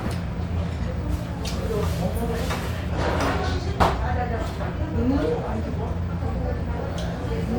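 At 2.89 s the sound jumps forward. This is a skip ahead. Roughly 0.7 s of audio never plays. It was dropped in transit or discarded by an overfull jitter buffer while later audio already waited. Nothing fills the hole. The two sides are joined almost directly, so the sound lurches abruptly from one moment to a later one.

From 3.59 to 4.25 s comes a jitter buffer speed-up. The buffer is holding more audio than it wants. The receiver trims many tiny pieces, each one or a few pitch periods long, to shed the extra delay. Playback runs at 108% speed with unchanged pitch. About 50 ms is removed. A second speed-up follows from 4.79 to 6.09 s, harder this time at 112%. It removes about 150 ms. Both stretches sound hurried and rushed.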